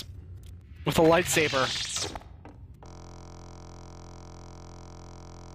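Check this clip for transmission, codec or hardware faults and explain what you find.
One hardware fault is present. From 2.86 s to the end, a system hang loop repeats a 23.22 ms segment, which fits a 1024-sample buffer, over a hundred times. This produces a steady 43.1 Hz buzz.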